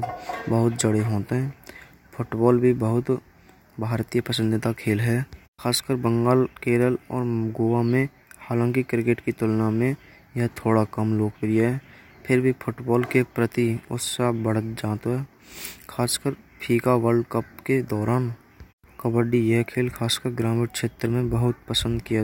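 No technical faults are audible anywhere in this speech recording.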